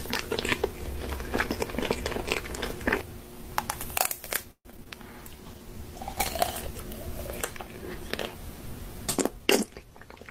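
From 4.51 to 4.87 s, packets went missing or arrived late again and again. The receiver bridged each hole by extending the last sound, with five holes in quick succession and the longest around 135 ms. This repeated packet loss leaves half of that stretch concealed, so the sound turns choppy and robotic, with pieces missing.

Right after, from 4.88 to 5.59 s, a jitter buffer slow-down follows. The receiver was short of reserve audio, so it repeated tiny pitch-period segments to add about 75 ms. Playback drops to roughly 90% speed at unchanged pitch, and sounds stretch out.

Overlapping this, from 5.19 to 7.63 s, a call bitrate drop sets in. The coarser, thinner sound fits the encoder falling from about 48 to 17 kbps. It stays at its lowest for 1.33 s, sounding rough, watery or muffled as detail and treble disappear.

Finally, from 9.67 to 10.28 s, a jitter buffer speed-up occurs. Too much audio had piled up in the buffer, so the receiver trimmed short pitch-period pieces, about 70 ms in total. 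The sound runs near 110% speed at the same pitch and comes across hurried.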